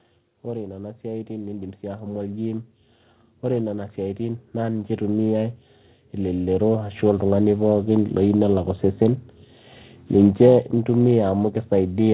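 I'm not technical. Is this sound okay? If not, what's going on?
No. The whole clip has periodic clock jitter: the timing clock inside the recording hardware wobbles steadily, roughly 300 times a second, which gives the speech a rough, metallic edge. That edge disappears in the pauses.

You'll also hear automatic gain rising three times, from 0.45 to 2.73 s, 3.42 to 5.63 s and 6.14 to 7.94 s. The volume control decides things are too quiet and turns up, so voice and background swell together over a couple of seconds. The call line's dull, muffled sound is just its normal cut-off at 4 kHz.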